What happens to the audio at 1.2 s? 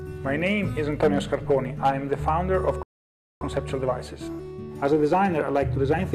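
Nothing goes wrong at 1.2 s; the audio plays through that moment intact, with no dropout, click or other fault.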